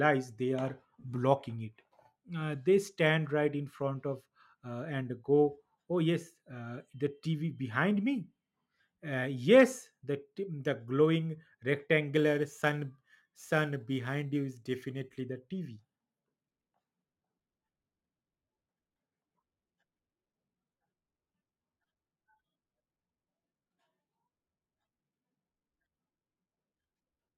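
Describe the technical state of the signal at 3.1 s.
At 3.1 s the signal is intact, with no audible fault at that point in the speech.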